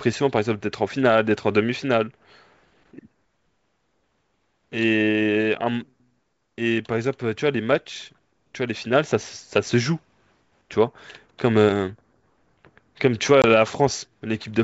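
Speech over a wideband G.722 link, clear up to about 7 kHz, in a clip about 15 seconds long. One fault is heard: packet loss on an ADPCM call, from 13.42 to 13.45 s. A hard-edged hole of about 20 ms cuts in, which fits roughly one lost packet. The decoder's predictor and step size then drift from the sender's. Speech comes back with slight distortion before it resettles.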